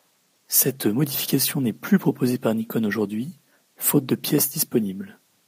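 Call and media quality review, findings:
No faults found in speech.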